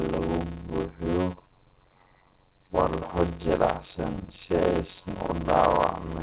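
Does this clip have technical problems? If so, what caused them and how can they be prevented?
Yes. The speech has a block size mismatch (padded) running through the whole clip. One stage writes 256-sample blocks into a stage that reads larger ones, and the shortfall in each block is zero-filled. The result is a steady buzz at about 91.9 Hz, the block rate, and the speech plays at about 0.53 times normal speed with its pitch roughly unchanged. A waveform shows regular flat gaps in every block, and a spectrogram shows evenly spaced vertical dropout stripes with harmonics of the buzz. Matching the block sizes on both sides of the interface, or adding a proper resampling FIFO between them, prevents this.

There are also two short concealed packet losses. The first is at 4.13 s, just before "si aysan u", and the second is at 5.28 s, just after "si aysan". About 10 ms of audio failed to arrive each time. 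The receiver extrapolated the preceding sound over roughly 5 ms and then 9 ms before blending back, which is heard as a brief smear or wobble. A spectrogram shows a tiny smoothed or blurred slice. A deeper jitter buffer, a more stable network, or forward error correction would prevent these losses. The call path itself is G.711 A-law, so nothing is present above 4 kHz.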